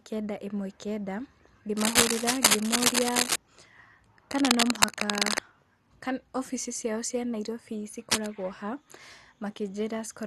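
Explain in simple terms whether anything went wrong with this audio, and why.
The speech sounds dull and muffled all the way through, with a gurgling, grainy edge. That is MP2 compression damage. The likely cause is a low-quality encoding that saved too few bits, so the upper frequencies were switched off and the rest became rough.

Three bursts of scratching and rustling, louder than the speech, cut in from 1.77 to 3.36 s, from 4.31 to 5.39 s, and briefly from 8.10 to 8.27 s. This is cable scratch noise, likely from a worn cable or connector being moved.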